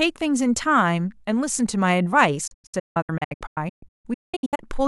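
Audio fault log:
2.47–4.66 s, digital broadcast dropout: speech keeps cutting to silence in short holes, the longest about 0.19 s, as lost frames mute the receiver for about 1.3 s total.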